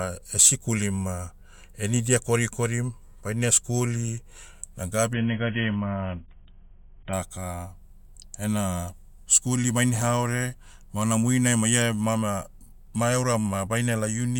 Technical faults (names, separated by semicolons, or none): adaptive stream at a lower bitrate